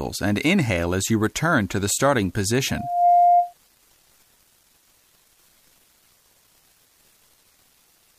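A pure tone near 704 Hz swells up over just under half a second from 2.69 s, rising a few decibels above the surrounding audio, and cuts off at 3.54 s. This is loudspeaker feedback squeal: the microphone re-amplified its own loudspeaker until that frequency ran away.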